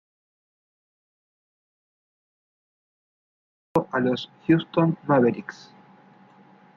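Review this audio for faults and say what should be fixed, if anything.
Audio dropout to silence from the start of the clip until 3.76 s: the first 3.76 s are silent with no room tone, and the speech enters mid-flow. This is likely a lost input, with the recorder writing silence until the signal returned. Prevent it by securing connections, checking mute states and monitoring input meters before and during recording.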